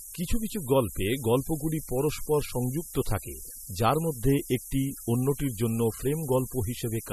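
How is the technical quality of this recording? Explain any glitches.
Poor, with two faults running through the whole speech clip.

Low bit depth with noise shaping, throughout: very coarse quantization, consistent with about 5 bits, with the rounding error pushed upward. The result is a thin, steady hiss nearly as loud as the speech and climbing steeply toward the treble.

MP3 compression is the likely cause of the watery, swirly texture throughout. Nothing remains above 12.5 kHz, and weak spectral detail flickers in and out, which fits a starved 32 kbps encode.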